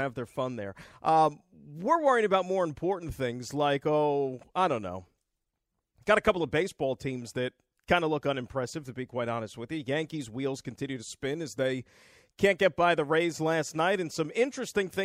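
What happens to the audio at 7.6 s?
Nothing goes wrong at 7.6 s; the speech continues intact through that moment, with no audible fault.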